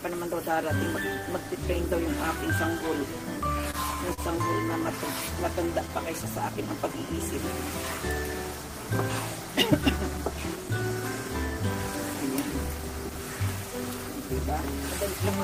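Short stalls from a late packet occur at 3.71 to 3.76 s and 4.14 to 4.20 s. Each time a packet arrived late, the jitter buffer emptied, and the receiver stretched the last sound for 28 ms and then 42 ms. Nothing is lost, but the sound briefly hangs before resuming.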